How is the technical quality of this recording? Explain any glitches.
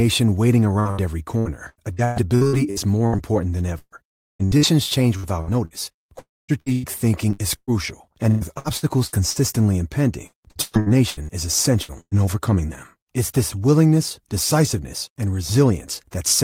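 The recording is poor, with network damage through most of its first 12 seconds.

Repeated packet loss (robotic sound) affects four stretches: 0.79–3.16 s, 3.79–5.74 s, 6.60–9.39 s and 10.26–12.21 s, the last ending just before "overcoming them". In each, six to eleven short holes, none longer than about 130 ms, are patched by extending the preceding sound. Roughly 22–30% of each span is this fill, so the speech turns choppy. The holes are brief and recur quickly, which sets this apart from a single long break.

Two single breaks of about 0.3 s, at 4.09–4.42 s and 6.19–6.51 s, are likely long network dropouts. The sound carries on briefly as a fading buzz and then goes essentially silent for most of the gap, around 0.2–0.3 s. Speech resumes afterwards with that portion gone. Unlike the robotic stretches, this is one sustained hole that ends in silence, not rapid warbling.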